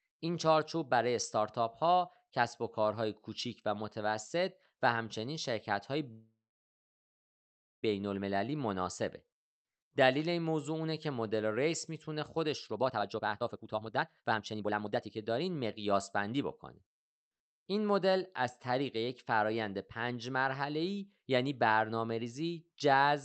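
Packets likely stalled in transit at 6.11 s and the jitter buffer ran dry, producing a call audio freeze. The last sound stretches into a brief fading buzz, then about 1.5 s of silence until 7.85 s, when speech resumes where it stopped, roughly 1.7 s late.

From 12.53 s to 17.05 s comes a jitter buffer speed-up. With too much audio queued, the receiver repeatedly cut out pitch-period-sized slices, shedding around one and a half seconds. Speech plays at about 138% speed at unchanged pitch and sounds hurried.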